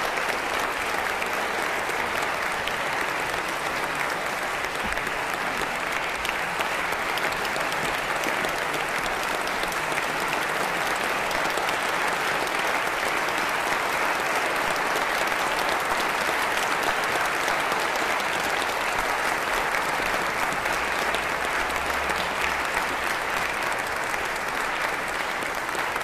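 At 21.56 s there is a single sharp click. It is brief and isolated, with nothing lost around it. A spectrogram would show it as a thin vertical line across all frequencies. The likely cause is dropped samples: a fraction of a millisecond of the stream went missing. The waveform then jumps straight from one value to a later one. That step is far too short to remove any audible sound. It is heard only as the click.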